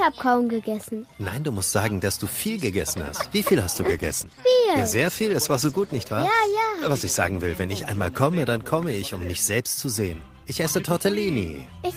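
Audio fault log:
3.77–11.49 s, call bitrate drop: the sound turns coarse and muffled, with high frequencies dulled, as the encoder works with far fewer bits, which fits a fall from roughly 48 to 15 kbps. The roughest stretch lasts about 3.9 s before clarity returns.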